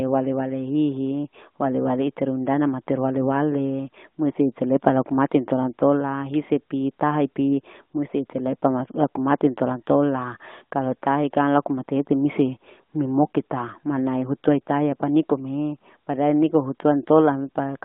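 No technical faults can be heard anywhere in this speech. It reaches the listener over an AMR narrowband mobile codec link at 12.2 kbps, so the sound is confined to a band of about 200 Hz to 3.6 kHz and carries only light codec damage.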